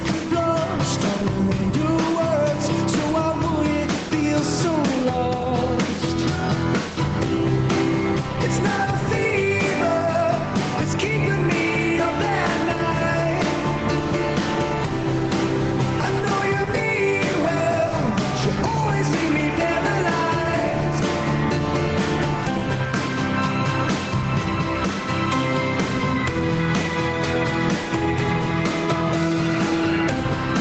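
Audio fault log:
Audio fault log:
Throughout: gain pumping. The gain swings by around 5 dB. Loud and quiet passages end up closer in level, so the audio sounds squashed. The likely cause is input gain set far too high, with a fast limiter or compressor clamping down on each peak and letting go in the gaps. Nothing is heard above about 8 kHz, as expected from the call codec.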